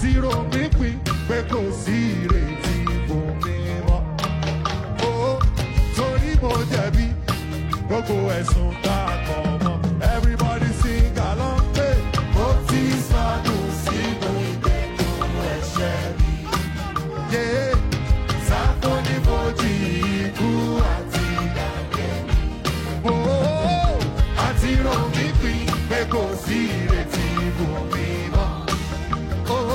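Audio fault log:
21.97–22.02 s and 26.99–27.05 s, compressed frames skipped: At each point the audio jumps forward, losing about 50 ms the first time and about 100 ms the second. That fits one and then two whole frames of roughly 46.4 ms being dropped, either missing from the stream or rejected by the decoder as corrupt.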